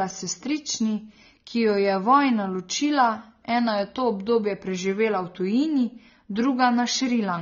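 AAC compression runs throughout the speech. Nothing is present above 6.9 kHz, and the voice sounds dull and smeared, with a warbling, fizzy edge on sibilants. This likely comes from AAC-LC coding at a low bitrate around 24 kbps, where spectral detail is discarded.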